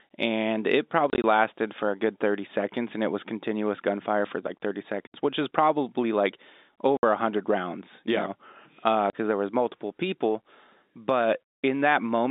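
A speech clip over a telephone line, with the band held to about 250 Hz to 3.7 kHz. It suffers packet loss filled with silence. Hard-edged gaps cut in at 1.1 to 1.24 s after "and it", 5.07 to 5.14 s, 6.97 to 7.03 s before "a hundred rounds you", and 9.10 to 9.13 s. Their lengths fit lost 10 ms packets replaced by silence.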